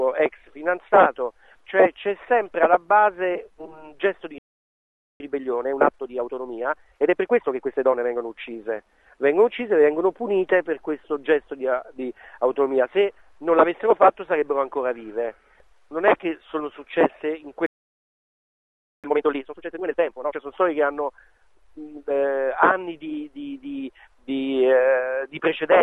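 At 4.38 s the sound stops dead. Silence holds for about 0.82 s, until 5.20 s. This is a playback stall. The player likely ran dry of buffered data or had its thread held up, so nothing reached the output. A second, longer gap follows at 17.66 s. It lasts about 1.37 s and ends at 19.04 s.

Time-compressed catch-up follows each stall. From 5.20 s to 8.20 s the audio runs at 1.25 times normal speed. The player is trimming the backlog the gap left behind. It removes tiny slices and cross-fades across the joins, so pitch stays put. The result sounds rushed. After the second stall, from 19.04 s to 20.40 s, the rate jumps to 2.0 times. That run is shorter but much more hurried.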